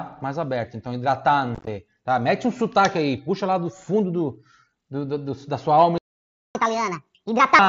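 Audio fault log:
1.55–1.67 s, unconcealed Bluetooth headset packet loss. Short chunks of the speech vanish across about 120 ms. About 67 ms goes missing in total, and the longest single gap is 15 ms. Nothing fills the gaps, so the voice sounds chopped, with hard edges at each hole.
5.98–6.55 s, playback stall. Just after "do da sua alma" the speech stops mid-flow for 0.57 s of silence. The player most likely ran short of data or was held up, so the output had nothing to play until it recovered.
6.55–7.59 s, catch-up at higher speed. When sound returns, the speech runs at 1.5 times normal speed. The player resamples its backlog to win back the lost time, so the pitch also rises by about seven semitones. It drops back to normal at 7.59 s.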